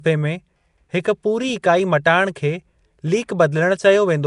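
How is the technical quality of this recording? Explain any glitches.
The technical quality is poor: codec damage is plainly audible across the whole speech recording. Nellymoser compression, present throughout, is the likely cause. The codec works on short blocks with a fixed bit budget, so quieter bands get no bits and are filled with noise. That gives the speech a rough, hissy halo and a smeared, underwater quality. Nothing reaches above 10.6 kHz, which fits a bitrate around 44 kbps.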